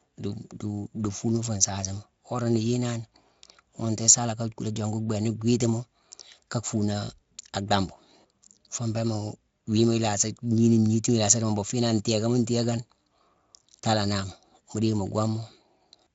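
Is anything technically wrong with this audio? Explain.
No, nothing here calls for a fix; it's just speech coming through a Speex-coded path, and there's no fault worth pointing at.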